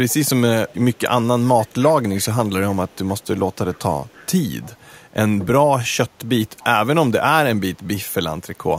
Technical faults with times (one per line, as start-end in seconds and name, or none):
0.09-0.26 echo leak
0.68-1.00 echo leak
1.61-2.28 echo leak
2.71-3.21 echo leak
3.73-4.27 echo leak
4.61-4.70 echo leak
6.59-6.64 echo leak